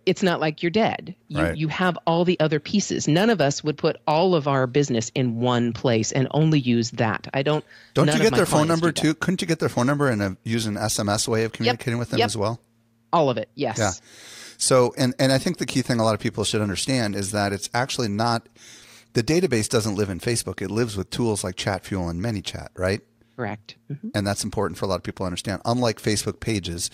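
Listening to this speech recording, nothing stood out as a technical problem at any point.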